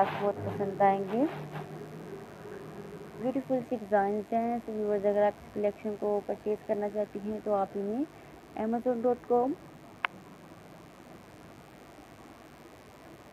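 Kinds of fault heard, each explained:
Mains buzz: there's a steady, raspy buzz under the whole clip, sitting roughly 30 dB below the main signal. It's built on 50 Hz mains, where sharp spikes twice per cycle from poor shielding or switching gear spray harmonics up into the kilohertz range.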